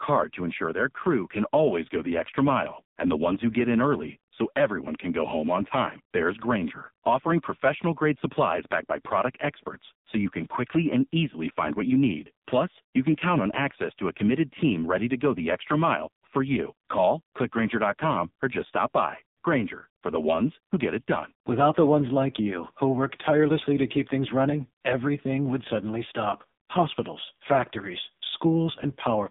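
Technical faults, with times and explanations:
Throughout, AMR narrowband mobile codec: the speech sits in a band of about 150 Hz to 3.7 kHz, with nothing above, so on a spectrogram everything over 3.7 kHz is empty. The codec rebuilds each 20 ms frame from a vocal-tract model excited by sparse pulses, and the damage here is heavy. The voice sounds buzzy and synthetic, which fits a low bitrate near 6 kbps. Harmonics look smeared, and the waveform's fine detail is simplified.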